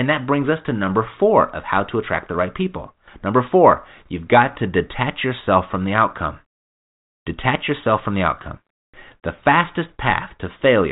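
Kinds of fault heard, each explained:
No faults can be heard in this speech.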